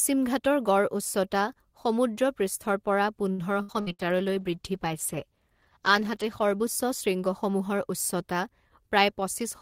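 Right after "উচ্চতা সমুদ্ৰপৃষ্ঠৰ পৰা", from 3.31 to 4.02 s, there is repeated packet loss with a robotic sound. Four gaps hit in quick succession. The longest is 69 ms. Each is patched by stretching the last sound, so about a third of the span is filled-in and choppy.

Overlapping this, a call bitrate drop starts at 3.70 s and lasts until 7.47 s. The bandwidth estimate fell and the encoder moved from 32 to 16 kbps. It stays at the lower rate for about 2.7 s. Coarser coding makes the speech sound rough and watery until the bitrate recovers.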